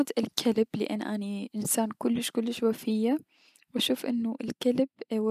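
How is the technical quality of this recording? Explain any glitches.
The technical quality of this recording holds up, and there are no glitches to explain.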